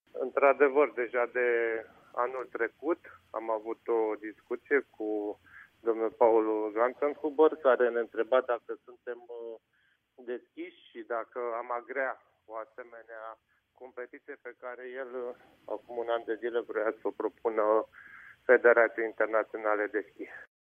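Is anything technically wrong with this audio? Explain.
No, nothing technically wrong stood out on listening to this audio.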